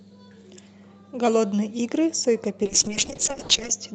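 From 2.64 s to the end at 3.94 s, a call bitrate drop sets in: the encoder is starved of bits, and the speech turns rough and watery with high frequencies stripped away. The worst stretch lasts about 1.07 s and fits a fall from 64 to roughly 6 kbps.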